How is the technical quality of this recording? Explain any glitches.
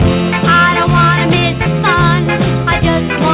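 There's one real glitch here: a skip ahead at about 1.66 s. Roughly 0.7 s of audio got dropped, so playback jumps straight forward with no gap. It sounds like an abrupt splice. The whole clip is also band-limited to 4 kHz, which fits a 64 kbps G.711-style telephone codec.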